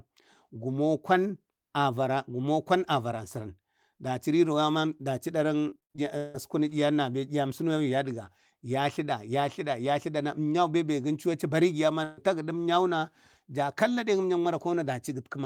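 From 5.69 to 6.36 s, repeated packet loss leaves six gaps, the longest 164 ms, patched by extending earlier sound. The speech turns choppy and robotic rather than breaking once.

At 12.04 to 12.19 s, a single burst of packet loss removes about 140 ms. The last sound is stretched and faded, never silent, and then the speech jumps ahead.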